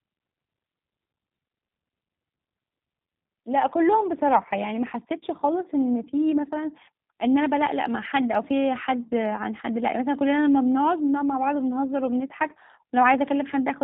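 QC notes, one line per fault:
Throughout, G.729 codec: the speech sounds slightly rough and synthetic, and the damage is plainly audible. Each 10 ms frame is rebuilt from a vocal tract filter shape, a pitch predictor and a handful of pulses rather than the original waveform, so fine detail is replaced by a model's approximation. Nothing above 4 kHz survives, leaving the sound narrowband and dull, which fits an 8 kbit/s voice codec.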